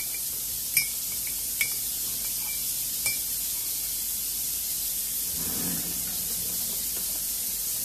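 At 4.88 s there is a brief blip from damaged data in a compressed stream. Bytes in the encoded data were lost or overwritten there. The decoder misread that frame, lost sync and hunted for the next frame header. The result is a short glitch of about 14 ms.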